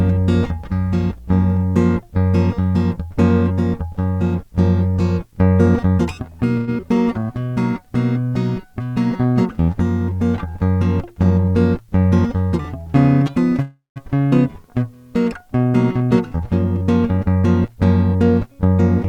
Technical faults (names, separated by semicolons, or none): mains hum; call audio freeze; short concealed packet loss; jitter buffer slow-down; jitter buffer speed-up